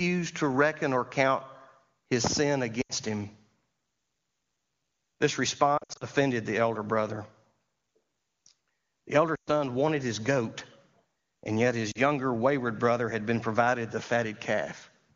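Around 2.81 s, right after "his sin", there are lost AMR speech frames: corrupted frames fail their check, so the decoder stretches the last good pitch with falling gain, giving a brief smeared dip. It recurs at 5.78 s before "the elder brother", at 9.35 s, and at 11.91 s after "and yet".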